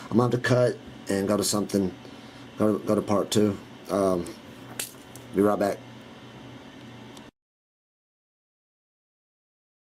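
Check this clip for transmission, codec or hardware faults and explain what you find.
No transmission, codec or hardware faults turned up here.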